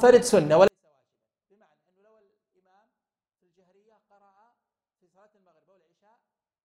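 From 0.68 s to the end there's a 24-bit alignment error: 24-bit samples sitting in 32-bit words get read as 32-bit, so everything drops by about 48 dB, clean but nearly inaudible.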